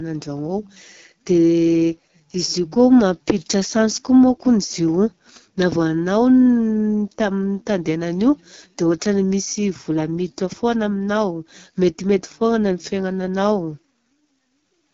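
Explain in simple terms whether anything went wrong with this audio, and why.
The speech was squeezed through the AMR wideband (HD Voice) codec, the phone-call compression used for HD calls, at one of its lowest quality settings, and it stays that way for the whole recording. The codec rebuilds the voice from a simplified model and fills the top with noise, so at this setting the speech sounds rough and raspy, and everything above about 7.2 kHz is missing.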